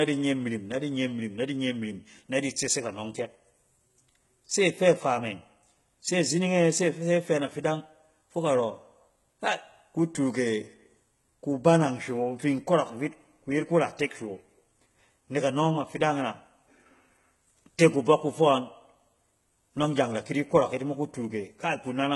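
Throughout the speech, the treble sounds synthetic. Nothing reaches above 11.8 kHz. S sounds come out gritty and lispy. The likely cause is heavy HE-AAC compression, fitting about 16 kbps. The top band is rebuilt from copied lower bands. Its harmonics misalign.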